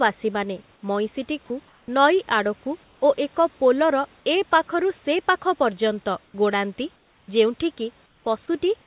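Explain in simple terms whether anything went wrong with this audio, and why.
A couple of things did go wrong, both tied to the call's speech detector. The first is sound dropped by the voice detector: at about 1.46 to 1.5 s, a short slice of the speech, around 20 ms of it, vanishes and is replaced by a bland hiss for about 40 ms. The likely cause is the sender's detector mistaking a soft bit of speech for background, shutting off briefly, then snapping back on.

The second is comfort noise in place of the background, which happens five times: 1.68 to 1.88 s, 2.84 to 3.02 s, 6.26 to 6.34 s, 6.96 to 7.28 s, and 8.06 to 8.26 s. In those pauses the real room noise gives way to a smooth, featureless hiss that's a touch quieter, most noticeably in the last two gaps. That's likely the sender going silent between phrases and the receiver filling the gap with synthetic noise, all heard through the call's narrow, phone-like sound with nothing above 4 kHz.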